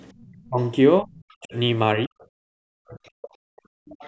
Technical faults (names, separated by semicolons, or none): background gated by the echo canceller; other side's voice leaking through; speech suppressed in double talk